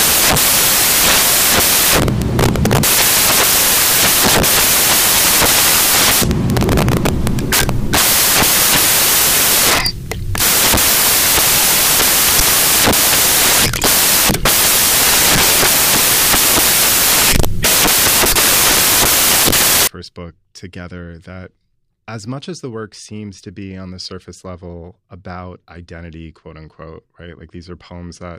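From the start up to about 19.87 s, the speech is buried under loud, hissy white noise. That's samples built from the wrong bytes: each sample is assembled with its bytes swapped or shifted by one, so the fast-jittering low-order bits end up as the big part of the value. The result is a wall of noise.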